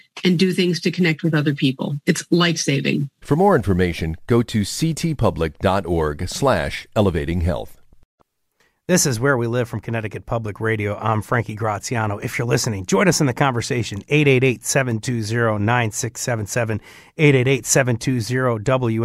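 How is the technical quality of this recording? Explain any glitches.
No technical glitches can be heard in this recording.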